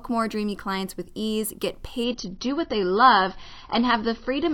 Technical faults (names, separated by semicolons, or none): adaptive stream at a lower bitrate